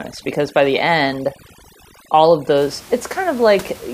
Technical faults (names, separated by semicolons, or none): overdone noise removal